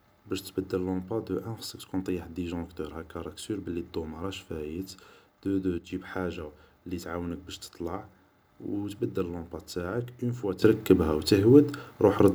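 Speech, with two sudden gain jumps: level and background drop about 6 dB from 5.78 to 5.9 s, then leap about 12 dB from 10.62 s to the end, likely from a gain change applied without a ramp.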